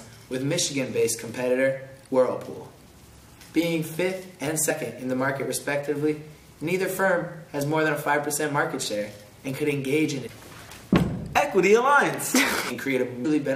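At 13.24 s there is a brief burst of damaged data in a compressed stream: corrupted bytes make the decoder misread the frame there, lose sync and search for the next header. The result is a short chirp, squawk, click or brief hole.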